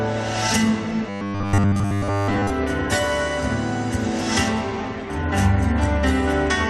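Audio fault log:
1.09 to 2.50 s, robotic sound from repeated short buffers: the sound turns rigid and metallic, with a fixed 100 Hz buzz that only loosely follows the original. This is likely from new audio arriving too slowly, so the same slice, which fits a 10 ms buffer, keeps repeating while most of the real audio is skipped.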